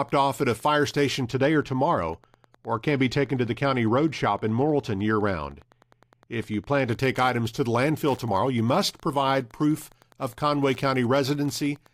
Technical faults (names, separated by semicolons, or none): Wi-Fi interference; de-emphasis applied wrongly